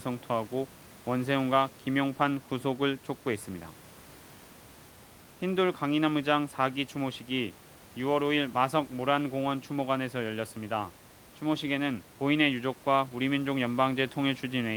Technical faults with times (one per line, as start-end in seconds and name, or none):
none